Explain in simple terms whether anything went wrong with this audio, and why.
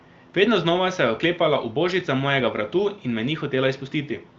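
Nothing went wrong here: the speech came through an HD Voice phone connection (the AMR wideband codec), which carries sound only up to about 7.4 kHz, so the very highest frequencies are missing by design, and no fault can be heard anywhere in the recording.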